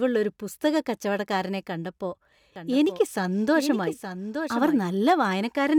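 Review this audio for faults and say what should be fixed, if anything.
A second copy of the speech was most likely mixed in through a slower capture path or a misaligned edit. From 2.56 to 4.82 s, just after "കച്ചവടക്കാരനെ കണ്ടപ്പോ", a doubled audio track trails about a second behind, roughly 10 dB quieter, dry and full-band, switching on and off abruptly. To prevent it, route each source through a single path and check for duplicate, offset regions before mixdown.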